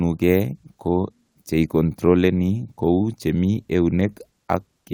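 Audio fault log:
No faults found in this speech clip.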